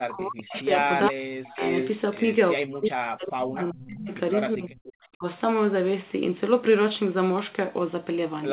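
From the start to 0.78 s, the speech sinks and breaks up in pieces. It drops by about 40 dB at its deepest. This is speech suppressed in double talk. Both ends were likely talking at once, and the echo canceller cut the near talker along with the echo. From 0.81 to 1.09 s a faint copy of the voice trails about 389 ms behind, roughly 10 dB below the speech. This is echo leak. A loudspeaker's sound likely got past the far end's echo canceller and returned. The same suppression returns from 1.11 to 1.62 s. Overlapping it, from 1.44 to 1.92 s, the echo grows louder, only about 5 dB under the speech. From 2.55 to 4.11 s comes the longest suppressed stretch, with chopped, dipping speech. A brief echo scrap sits at 3.82 to 3.87 s, about 20 dB down. The last suppression runs from 4.55 to 5.24 s, with one more quiet echo from 4.85 to 4.93 s, again 389 ms late. Throughout, nothing sounds above 4 kHz, which fits a narrowband G.711 call.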